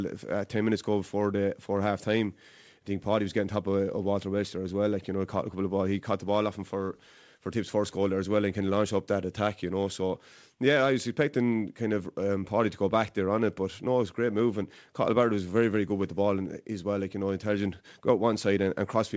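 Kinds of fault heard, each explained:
Nothing here counts as a fault: the speech has just come through a call connection, and the way the sound stops at 8 kHz fits a wideband call codec like G.722 doing its normal job.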